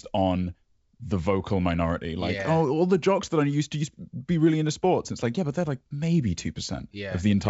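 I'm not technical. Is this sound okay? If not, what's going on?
Yes, nothing in this speech recording points to a problem. It has the bright but slightly bounded sound of G.722 wideband telephone coding, with the voice clear up to about 7 kHz and at most a faint hiss in the top range.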